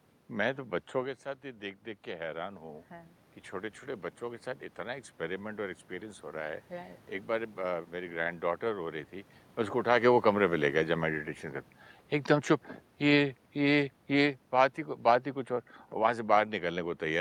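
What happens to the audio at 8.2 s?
A short stall from a late packet, 8.23 to 8.28 s: the jitter buffer ran dry and stretched the last sound about 24 ms, so it's held rather than lost.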